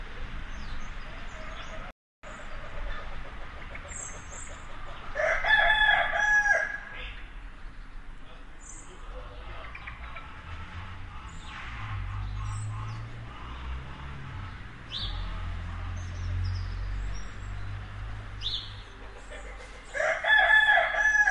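A playback stall interrupts this recording of sounds: the player likely ran short of buffered data or had its thread blocked, so output dropped to silence from 1.91 to 2.23 s, a gap of about 325 ms, before the sound resumed.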